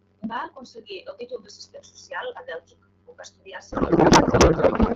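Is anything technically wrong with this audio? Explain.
Yes. From 3.71 s, right after "va estudiar", through the end of the clip at about 4.95 s, there is a codec payload misread. The AMR packets are octet-aligned but are being unpacked as bandwidth-efficient, so every field lands in the wrong bits. The decoder still sees plausible frames and turns the speech into garbled noise and warble that barely tracks it. Packet loss would cause gaps or smeared repeats, and a low bitrate would make the speech rough. Here the damage is abrupt and lasts to the end, while the wideband speech before it is clear, which fits AMR-WB at about 12.65 kbit/s.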